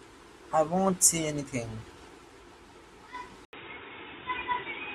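At 3.45 s the speech drops out for a brief 80 ms gap, then returns dull and boxy through to the end, with nothing above 3.8 kHz and a faint new background noise sitting roughly 40 dB under the speech. Loudness stays about the same. The likely cause is an input switched to a poorer device: the recording moved mid-take to a narrower-band microphone or headset call profile, which brings its own tone and noise floor.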